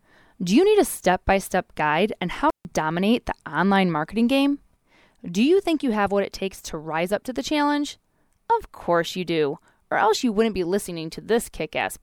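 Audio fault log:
2.50–2.65 s, intermittent contact: a loose connection in the signal path opens for about 147 ms. With the circuit broken, the speech drops out almost entirely and only faint hiss remains during the gap. The contact surfaces making and breaking unevenly at each end produce short crackles where the sound cuts out at 2.50 s and where it returns at 2.65 s.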